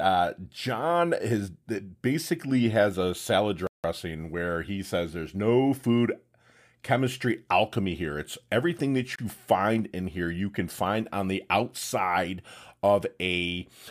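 A Bluetooth stall, likely from interference holding up packets until the headphone buffer ran dry, cuts the speech to silence twice: from 3.67 to 3.84 s, after "has a salad", and from 9.16 to 9.19 s, after "everything that". Each time the speech then picks up again.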